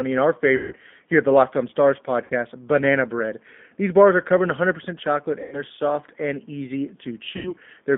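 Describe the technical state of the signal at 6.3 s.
At 6.3 s the speech carries G.729 codec damage, present across the whole clip: each 10 ms frame is rebuilt from a vocal tract filter, pitch predictor and sparse pulses, giving a rough, buzzy, synthetic texture within a 200 Hz to 3.6 kHz band, consistent with an 8 kbit/s codec. That roughness sets it apart from a simple telephone-band filter.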